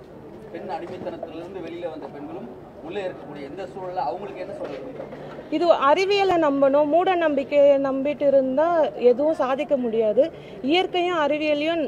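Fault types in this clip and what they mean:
No technical faults can be heard anywhere in this audio. Nothing in the sound stands out as a dropout, distortion or other processing problem.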